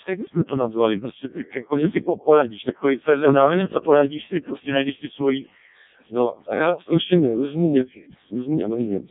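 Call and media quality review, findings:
Codec 2 vocoder, whole clip: robotic, buzzy speech, heavy damage. Waveform resynthesised from pitch, voicing and envelope at about 0.7 kbit/s; no content above 3.7 kHz.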